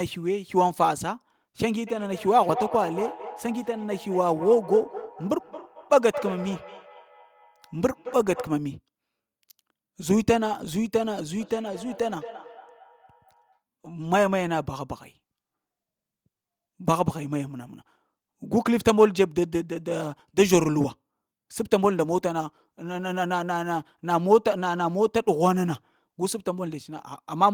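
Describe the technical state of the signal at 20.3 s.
At 20.3 s the speech signal is intact, with no audible fault at that moment.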